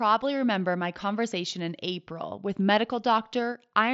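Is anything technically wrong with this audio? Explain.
No, nothing in this speech clip stands out as a technical fault. It has passed through a Bluetooth mSBC headset link working as designed, so nothing reaches above 7.7 kHz and louder sounds carry a light grainy texture from the codec.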